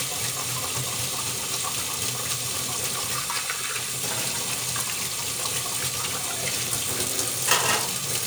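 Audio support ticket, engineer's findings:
No technical faults found in the signal; capture and playback path intact across the full clip.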